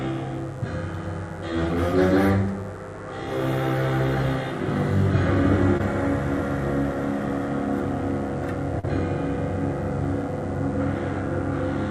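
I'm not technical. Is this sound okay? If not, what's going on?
No, there are two problems. The first is mains buzz, a steady, raspy hum that runs under the whole clip. Electrical interference from the power supply, somewhere like a dimmer or a poorly shielded cable, is leaking into the audio at the 50 Hz mains rate, and its sharp spikes spread up into a gritty buzz rather than a soft hum. It sits well below the actual sound, but it's there the whole time.

The second is short concealed packet loss, which happens twice: around 5.77 to 5.81 s and around 8.79 to 8.85 s. Tiny pieces of the audio, a few hundredths of a second each, didn't arrive in time over the connection. The receiving end covered the gaps by stretching the last bit of sound it had and then blending back in. You'll hear a quick smear or wobble there, about twice as long at the second spot.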